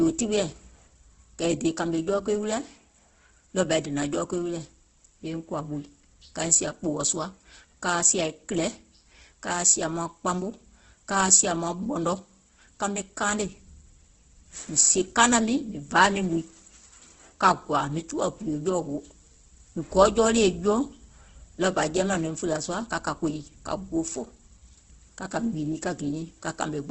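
Throughout the speech the sound is grainy and rough, with a hiss-like texture woven into tones and nothing above about 8.2 kHz. This is likely heavy Opus compression in its CELT mode, at a low rate that fits around 12 kbps. Starved bands are filled with folded copies of lower bands or noise rather than left empty. That is why it sounds coarse and noisy instead of the swirly, watery holes of low-bitrate MP3.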